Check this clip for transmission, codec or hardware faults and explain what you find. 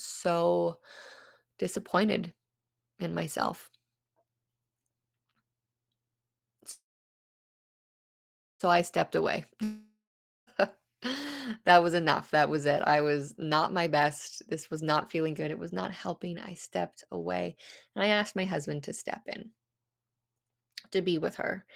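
There are three network-type faults in this speech clip: a freeze, a dropout, and a run of speed-ups.

From 6.71 to 8.63 s there's a call audio freeze. The last sound smears into a brief fading buzz, then about 1.8 s of near silence, and the speech picks up at "I stepped away" with nothing lost. It's likely packets stalled and the jitter buffer ran dry, so the gap was inserted and everything after it now runs about 1.9 s late.

From 9.64 to 10.50 s there's a long network dropout. A short fading tail gives way to roughly half a second of silence, and when the audio returns about 0.84 s of speech is gone. The likely cause is packets that never arrived, so the receiver skips ahead and that stretch is never played.

There are three jitter buffer speed-ups: 13.37 to 14.06 s at 119% speed, 14.48 to 16.36 s at 113% ending just before "I stepped away and", and 18.03 to 18.71 s at 106%, between "I stepped away and" and "to step in". 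The buffer was overfull, so the receiver trimmed tiny pitch-period slices over and over. Pitch stays put but the talker sounds hurried, most noticeably in the first and second spots. Altogether about half a second is shaved off.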